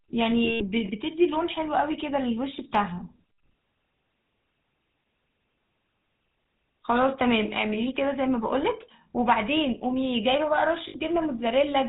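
From the start, the speech carries a plainly audible GSM full-rate codec sound. Nothing passes above 4 kHz, and the sparse, regularly pulsed excitation gives a buzzy, gravelly roughness that fits the 13 kbps GSM coder. Plain band-limiting would only sound dull, without this grain.

From 0.44 to 0.63 s, lost GSM frames leave scattered holes totalling about 140 ms, the longest run about a tenth of a second. Each hole is bridged by repeating the last good frame, so it rings metallically rather than dropping to silence. At 10.88 to 10.96 s, a shorter 60 ms loss gives the same brief metallic smear.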